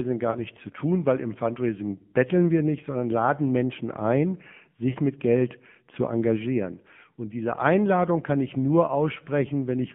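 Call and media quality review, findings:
AMR narrowband mobile codec, throughout: audio confined to roughly 150 Hz–3.4 kHz, plainly buzzy and synthetic. A low AMR-NB mode, fitting around 7.4 kbps, distinguishes this from simple band-limiting.

Lost AMR speech frames, 0.32–0.40 s before "zu tun weil im" and 4.90–4.97 s: brief warble and dip, fitting one and two lost 20 ms frames. Decoder held prior pitch at falling gain, not a hard silent gap.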